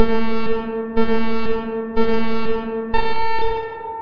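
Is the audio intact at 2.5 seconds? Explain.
Yes, the audio is intact at 2.5 seconds, with nothing at that moment breaking up, dropping out or otherwise disturbing the sound.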